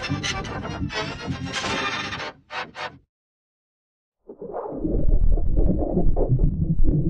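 No technical faults are audible anywhere in the recording.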